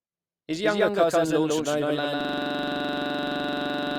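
From the start the speech has a flat, full-band echo about as loud as the original, trailing by roughly 150 ms: a doubled audio track, likely a second, slower capture path mixed in. At 2.21 s, after "cousin launched an overland", a system hang loop begins: a 42.67 ms fragment repeats at 23.4 Hz to the end as a machine-gun stutter, fitting a 2048-sample ring buffer cycling while the system froze.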